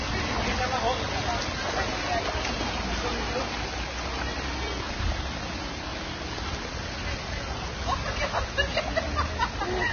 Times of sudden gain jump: none

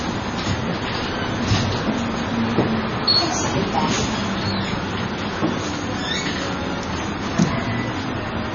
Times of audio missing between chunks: none

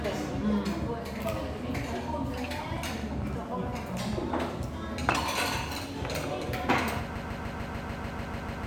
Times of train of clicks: 2.77-4.37

